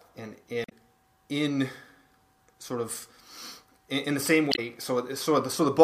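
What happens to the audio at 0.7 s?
Right around there, from about 0.64 to 0.72 s, you get a burst of damaged data in a compressed stream. A chunk of the encoded bitstream is corrupt, so the decoder misreads those frames, loses its sync, and has to hunt for the next valid frame header before it can carry on. What you hear is a brief glitch, a chirp, squawk, click or short hole, lasting roughly 80 ms, sitting right over that stretch of the audio.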